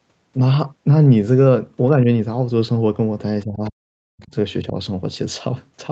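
At 1.96 to 2.07 s the speech dips briefly by a few decibels, likely speech suppressed in double talk, where the echo canceller, hearing both sides at once, attenuates the near talker along with the echo. From 3.44 to 4.3 s likely the same suppression goes far deeper, about 40 dB at worst, affecting most of that stretch. Inside it, faint scraps of the other side's voice leak through at 3.64 s and again at 4.18 to 4.27 s, some 30 to 35 dB below the speech, likely residual loudspeaker echo the canceller failed to remove. At 4.68 to 4.76 s a shorter suppression drops the speech by about 10 dB, likely the canceller again clamping down during overlapping talk.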